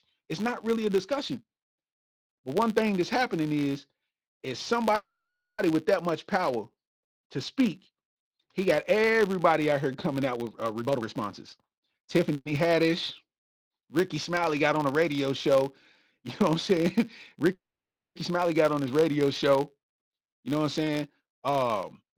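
A steady buzz at 100 Hz runs under the whole speech clip, rising and falling with the level of the talking. This is a filter restarted on every block: each block starts from a cleared state, so a small transient repeats 100 times a second.

From 4.95 to 5.60 s the speech stops. The last sound is drawn out as a brief fading buzz and then about half a second of silence before the talking resumes where it left off, with nothing skipped. This is a call audio freeze, likely from packets held up in transit until the jitter buffer ran dry, adding about 630 ms of delay.

From 10.81 to 12.31 s the speech sounds rushed, running at about 127% speed with its pitch unchanged. This is a jitter buffer speed-up: to shed excess buffered delay, the receiver repeatedly cut out short pitch-period slices, roughly 400 ms in total.

Right after, from 12.33 to 12.47 s, a much shorter call audio freeze inserts a 120 ms hold. 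It is almost all a smeared continuation of the last sound, with only a trace of silence. It was likely caused by another brief late arrival of packets.

From 17.53 to 18.17 s a third call audio freeze gives a quick fade and then about 570 ms of silence, with speech resuming intact. The likely cause is again a stalled packet stream emptying the buffer, adding about 620 ms of delay.

From 19.96 to 22.12 s a milder jitter buffer speed-up runs the speech at about 107% speed. The slight hurry comes from trimming roughly 150 ms of pitch periods to pull the delay back down.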